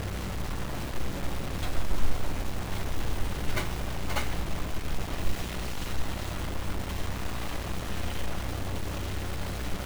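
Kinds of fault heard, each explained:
Stuck bit: a harsh, buzzy grit sits on the sound the whole way through, and quiet moments fill with noise instead of dropping to silence. That points to one data bit likely jammed at 0 or 1, throwing samples off by a fixed step of roughly -35 dBFS.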